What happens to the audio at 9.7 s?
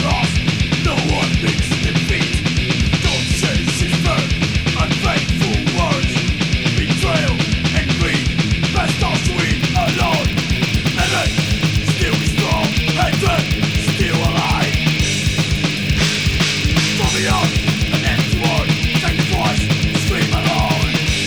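A filter restarted on every block from 9.59 s to the end: its state resets each block, so every block opens with a transient, producing a 100 Hz buzz that tracks the level.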